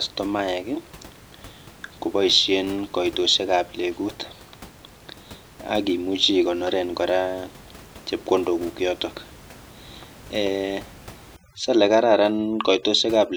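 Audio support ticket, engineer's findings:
Overdone noise removal, 11.36 to 13.37 s: denoiser set too aggressive, gating bands near its noise estimate, leaving twinkling specks in near silence and quiet parts of speech lost. Room noise about 23 dB below speech.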